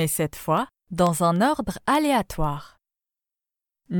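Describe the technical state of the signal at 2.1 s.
The receiving device is running on its own clock, unlocked from the sender's, drifting by roughly 200 ppm. This produces word clock ticks throughout 0.18–3.92 s: sharp, uneven clicks about ten times per second as single samples slip.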